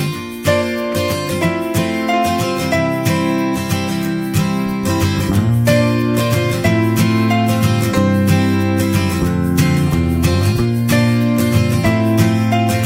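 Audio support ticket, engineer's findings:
No faults found in the audio; nothing to report for this ticket.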